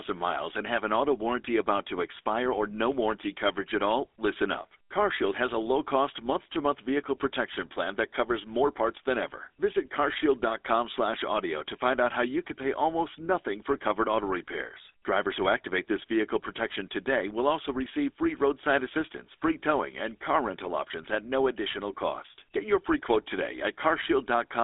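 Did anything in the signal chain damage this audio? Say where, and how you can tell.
Yes. Throughout the clip, the speech has a buzzy, gravelly roughness, with nothing above about 3.8 kHz and a line band of roughly 300 Hz to 3.6 kHz. This is GSM full-rate codec damage, which fits a 13 kbps coder that rebuilds the voice from sparse, regularly spaced excitation pulses.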